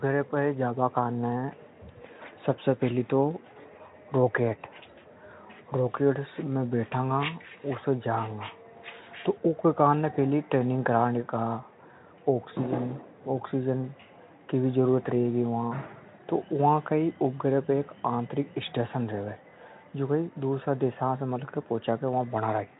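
Nothing in this recording of speech stood out on listening.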